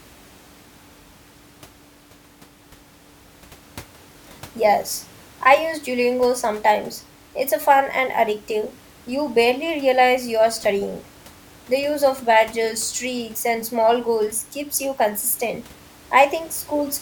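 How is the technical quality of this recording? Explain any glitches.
No glitches can be heard in the speech recording, and the only other sound is the room's own background noise, sitting about 26 dB below the speech as part of the space rather than any fault of the system.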